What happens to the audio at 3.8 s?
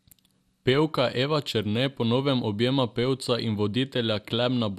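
At 3.8 s the speech carries MP2 compression artefacts, present throughout the clip: dull, gurgling and granular, likely from starving Layer II's 32 sub-bands of bits, which fits about 80 kbps. A spectrogram shows upper bands blinking on and off in blocky patches.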